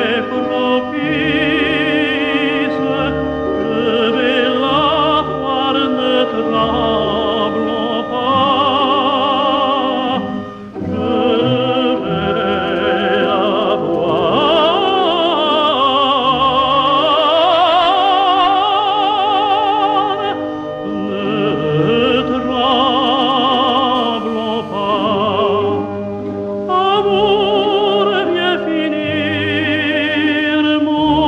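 From 12.53 to 15.13 s and again from 23.07 to 23.79 s come GSM signalling bursts: a nearby 2G handset sends short clusters of radio pulses, and the audio circuitry demodulates them into a galloping dit-dit-dit of ticks and brief rasps pulsing at about 217 Hz. They sit roughly 20 dB below the programme in the first stretch and somewhat louder, near 15 dB down, in the second. A spectrogram shows them as intermittent vertical stacks of evenly spaced harmonic lines, with clustered spikes riding on the waveform.

Directly afterwards, from 23.95 to 25.06 s, the handset moves into continuous transmission and GSM phone buzz takes over: a hard, raspy tone at 216.7 Hz, unrelated to the wanted sound, about 23 dB below it. The rectified 217-per-second transmit pulses make a dense comb of harmonics that shows as unbroken horizontal lines across the spectrogram, while the waveform carries a steady ripple instead of broken clusters.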